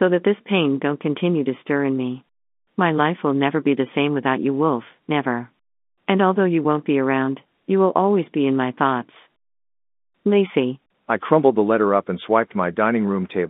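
Listening to this speech recording, nothing technical stood out.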